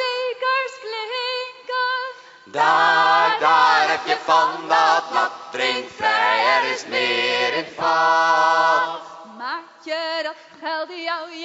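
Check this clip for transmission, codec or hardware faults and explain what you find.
No faults found.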